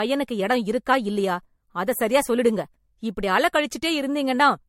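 Generation loss runs through the whole speech clip. It sounds swirly, smeared and hollow, with blurred attacks and nothing above 16.6 kHz. That fits repeated MP3 coding near 66 kbit/s, likely about four passes, each requantising on a shifted frame grid so the noise builds up.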